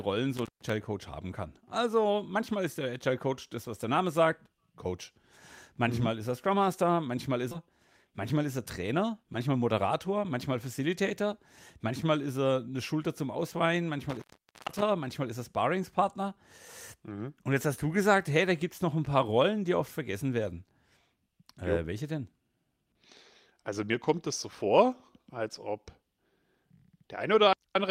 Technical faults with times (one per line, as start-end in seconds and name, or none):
0.37-0.70 intermittent contact
7.51-7.53 skip ahead
7.68-9.56 jitter buffer speed-up
14.09-14.82 intermittent contact